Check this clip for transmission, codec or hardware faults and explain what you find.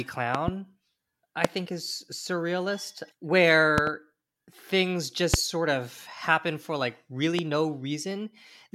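Seven loud pops, in five bursts, cut across the speech. They fall at 0.35–0.50 s (a double pop), 1.45–1.47 s just before "think is surrealist", 3.78–3.90 s (another double), 5.34–5.36 s, and 7.39–7.41 s just after "happen for like". They peak around 20 dB above the speech, with the last one nearer 15 dB. A sudden voltage pulse, likely from a plug, switch or static discharge, was added on top of the signal. The speech continues intact underneath, which sets these pops apart from dropout clicks, where the audio itself breaks off.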